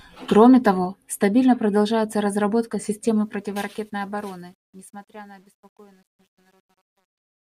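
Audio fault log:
3.03–7.58 s: truncation distortion on a fade. The fade-out begins around 3 s and turns gritty as the level falls. From 4.64 s to the end it is at its worst. Undithered gain rounding leaves coarse square steps, which fits a 10-bit stage.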